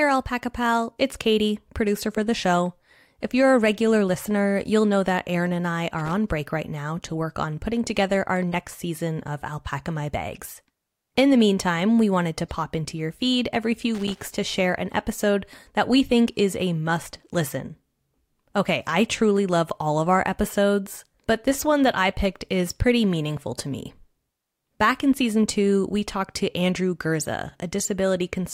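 At 5.99 to 6.13 s, after "and I", a loose connector crackle cuts in. A worn contact makes and breaks, chopping the speech into irregular scratching crackle. It returns from 13.95 to 14.24 s, after "into your feed every", about twice as long.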